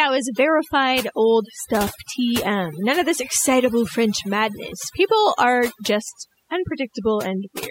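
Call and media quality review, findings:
Background dropped, breaking into twinkling specks, throughout. Overdone noise removal: suppressor set too strong, cutting bands near its noise estimate, taking quiet speech detail too.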